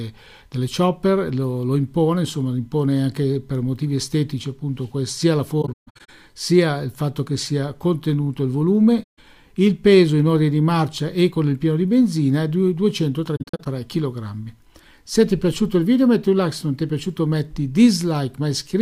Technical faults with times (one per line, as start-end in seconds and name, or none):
5.61-6.10 AAC frame loss with muting
9.03-9.19 AAC frame loss with muting
13.36-13.67 AAC frame loss with muting